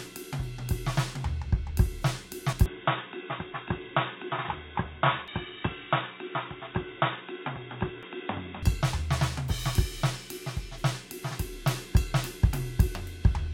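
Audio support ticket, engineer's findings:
Music goes dull and boxy from 2.66 to 8.63 s, nothing above 3.8 kHz, about 5 dB quieter, with a fresh faint noise floor. No gap at either switch. Likely input switched to a poorer device, a narrowband mic or headset profile, then back.

Skips at 5.28, 8.03 and 10.78 s, each roughly a third of a second gone, butted together with no silence. Regular spacing fits 3-second chunks. Likely audio missing between chunks while the recorder rolls buffers.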